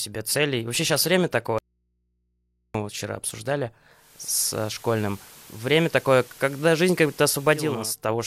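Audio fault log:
1.58–2.74 s, audio dropout to a faint residue: the speech cuts off abruptly after "сейчас время" and returns mid-flow at "вот вчера обсуждали". The 1.16 s gap holds only mains hum roughly 50 dB down, likely an interrupted feed into a still-live, open input.
3.89–7.96 s, digital radio blending to analogue: after "вот вчера обсуждали" the receiver cross-fades over 489 ms to the FM broadcast. Hiss rises to roughly 25 dB below the speech, and level shifts by about 1 dB.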